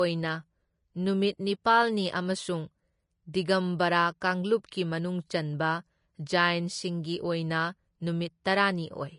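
Throughout the speech, the sound is hissy and grainy, with roughened tones, blurred attacks and nothing above 10.6 kHz. The codec damage is plainly audible and likely comes from Vorbis compression at a low setting, consistent with roughly 32 kbps, where the treble is quantised so coarsely that detail turns into noise.

At 4.21 s and again at 8.44 s, a brief hiss of about 10 to 11 ms comes just ahead of a sharp attack, which sounds soft or smeared. This is pre-echo: the noise sized for the loud attack is spread across its whole transform block, filling the quiet moment before it.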